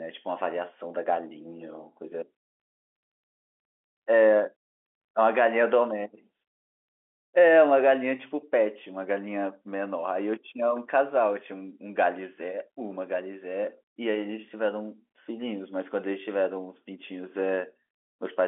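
Nothing's technically wrong here: it's speech carried over G.711 mu-law telephone coding at 64 kbps, so it has that familiar narrow phone-line sound with nothing above about 3.8 kHz, and there's no fault to point to.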